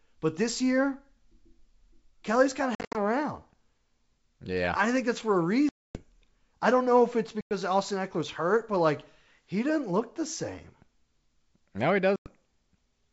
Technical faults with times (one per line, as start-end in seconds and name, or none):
2.75-3.00 packet loss on an ADPCM call
5.69-6.02 packet loss on an ADPCM call
7.41-7.55 packet loss on an ADPCM call
12.16-12.27 packet loss on an ADPCM call